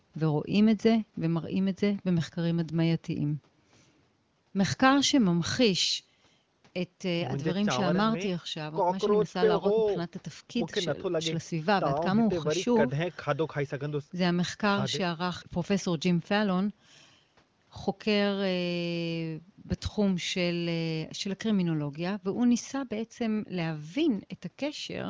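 No technical faults occur at any point in this speech clip, so there is nothing to place in time order.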